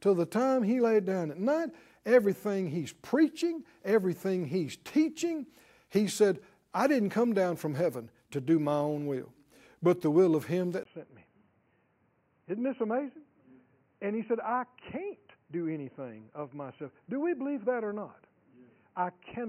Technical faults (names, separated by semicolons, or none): input switched to a poorer device